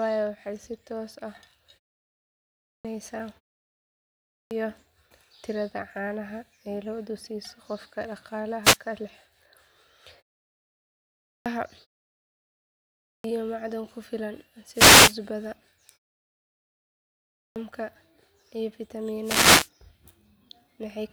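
Speech restarts abruptly at 2.25 s and 3.9 s, with about 0.6 s of each phrase's opening missing. This is a clipped start after a pause. After silences of roughly half a second, the output device has gone idle, and it swallows the first sounds while it wakes. A brief swish of static at 8.63 to 8.77 s, just before "ka hela", is a wireless microphone noise hit. The FM radio link fades through cancelling reflections, and receiver noise surges up. More clipped starts follow at 10.82 s and 12.6 s, the latter cutting into "macdan ku filan", each losing about 0.64 s. After "macdan ku filan", a longer static burst runs from 14.73 to 15.16 s. The final clipped start comes at 16.94 s, after a pause of about 1 s, and the last noise hit covers 19.22 to 19.69 s.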